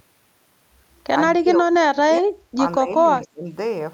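Speech suppressed in double talk ducks the speech at 1.38 to 1.86 s and 2.04 to 2.33 s, by about 20 to 25 dB, only slightly at 2.79 to 2.9 s, then deeply at 3.17 to 3.51 s. This is likely an echo canceller turning down overlapping talk. The level sags rather than snapping to silence like a dropout.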